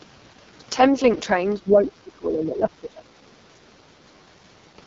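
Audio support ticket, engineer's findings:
AMR wideband (HD Voice) codec, entire clip. Speech rough and raspy, band-limited with nothing above 7.5 kHz. Vocal-tract model with pulse excitation starved of bits. Roughness fits the lowest AMR-WB mode, around 6.6 kbit/s. Top band is synthetic noise, not real speech detail.

Speech suppressed in double talk, 1.57 to 4.12 s. Talker's level dips in pieces, deepest drop about 20 dB, roughly 2 s affected in total. Likely echo canceller confusing near-end speech with loudspeaker echo during simultaneous talk and attenuating both.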